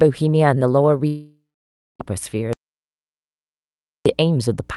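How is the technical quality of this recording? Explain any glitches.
The recording is compromised by a constant hum and two long gaps that remove content. The call-codec path itself shows its usual coding noise and a top end ending near 12 kHz.

Mains hum runs throughout: a steady 60 Hz tone, roughly 35 dB below the speech, leaked in from the power line. On a spectrogram it is an unbroken horizontal line at the bottom.

From 1.07 to 2.01 s there is a long network dropout, likely caused by missing packets. The last sound is stretched into a fading buzz or hiss, then about 0.59 s of near-silence. The waveform shows a decaying smear that flattens out.

From 2.53 to 4.06 s there is an audio dropout to silence, likely from lost input. The recorder wrote silence, with no room tone. The waveform is a flat line and the spectrogram a blank column.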